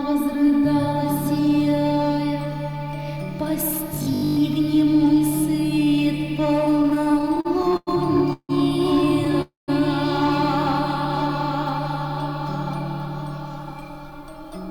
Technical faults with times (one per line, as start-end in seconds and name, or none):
3.95-4.41 robotic sound from repeated short buffers
6.59-7.89 repeated stalls (stutter)
8.33-8.51 call audio freeze
9.42-9.70 call audio freeze
13.82-14.66 jitter buffer speed-up